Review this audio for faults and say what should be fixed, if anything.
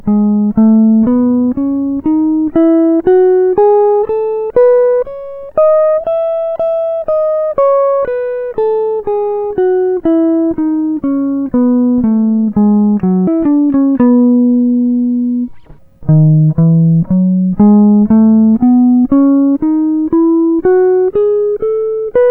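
From 13.27 to 15.79 s a section at the wrong speed plays 1.77 times too fast and roughly ten semitones high, likely from a stage running on the wrong clock. Spectrogram harmonics jump upward and spread apart, and waveform transients bunch together. Locking every stage to the source sample rate prevents it.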